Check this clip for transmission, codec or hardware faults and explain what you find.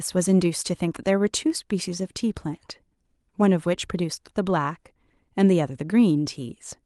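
No transmission, codec or hardware faults are audible in this speech recording.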